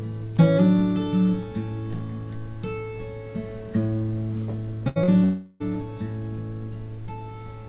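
At 4.88 to 4.99 s, a held, fading tail of the last sound lasts about 75 ms before the audio jumps ahead: a burst of packet loss, with roughly 80 ms never played.

At 5.04 to 5.11 s, a brief smear follows. This is short concealed packet loss: about 40 ms went missing, and the receiver covered it with a 43 ms continuation before blending back.

From 5.24 to 5.63 s, the sound stretches into a long fading continuation lasting about 362 ms with no true silence, then resumes further on. This is a long network dropout, likely the network delivering nothing while about 360 ms was lost.

Throughout, nothing is heard above 4 kHz, which fits the G.711 mu-law call codec at 64 kbps.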